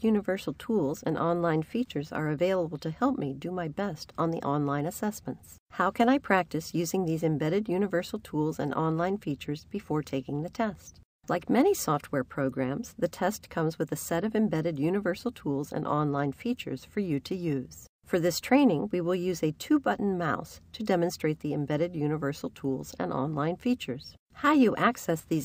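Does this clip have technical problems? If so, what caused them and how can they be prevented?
No, the signal shows no technical faults at any point, so there is nothing to trace back or prevent.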